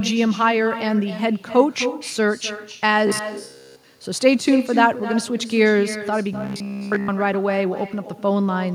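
From start to finish the speech carries an echo with no canceller: a quieter, thinner copy, about 11 dB down, follows each phrase by roughly 0.3 s. That distinct delayed repeat, rather than a smeared tail, separates it from room reverberation.

From 3.07 to 3.84 s and again from 6.33 to 7.10 s the speech turns into a rigid metallic buzz pitched at 66.7 Hz. This is robotic sound from repeated short buffers, likely a roughly 15 ms buffer looping while fresh audio is skipped. The fixed buzz pitch, not silence, distinguishes it from dropouts.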